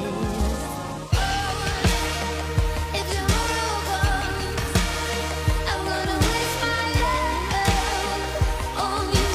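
At 3.02 to 3.06 s and 7.00 to 7.05 s, the sound skips: overlap between stream segments, trimming roughly 33–43 ms at 4-second segment joins.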